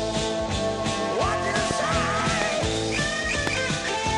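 At 1.56 to 1.73 s a pair of loud pops sits on top of the audio, followed by single pops at 2.42 to 2.44 s and 3.47 to 3.49 s. Each peaks roughly 20 dB above the surrounding signal, and the sound carries on underneath. The sharp, brief pulse shape most likely comes from a voltage spike entering the chain from a switch, connector, static discharge or driver glitch. Downstream circuitry then shapes it into an audible pop.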